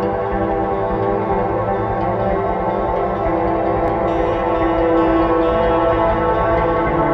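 At 3.88 s, two stream segments carry overlapping time stamps, and the player trims the overlap from music that was never actually duplicated. About 15 ms of audio is lost, the waveform jumps across the gap, and a single brief click or tiny skip is heard.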